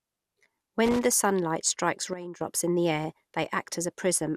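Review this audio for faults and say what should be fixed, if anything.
The whole recording has a swirly, smeared, hollow quality, with consonant attacks blurred and nothing above 16 kHz. That's more damage than one decent encode would cause, so it's likely generation loss: several lossy passes, which fits an MP2 chain at around 96 kbit/s repeated a few times. Each pass requantises on a shifted frame grid, so the noise stacks up. Go back to the original source and keep it lossless until one final encode.

From 0.85 s to 1.05 s, right before "sunlight strikes", there's a short irregular burst of scratchy crackle. That's loose connector crackle: a worn or dirty contact was making and breaking as it moved, chopping the signal into fragments. It can't really be repaired cleanly, so redo that stretch if possible. To prevent it, clean or replace the suspect cable or jack and keep the cables still while recording.

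Just after "sunlight strikes", at 2.13 s, everything drops abruptly by about 12 dB, voice and background noise together, and stays down until 2.41 s, just before "in the air". That's a sudden gain jump, with a level change landing from one sample to the next and no fade. The likely cause is a gain setting applied without a ramp. Bringing that segment back up by about 12 dB with short crossfades at both edges should fix it. Make sure any level change in the chain is applied with a smooth ramp.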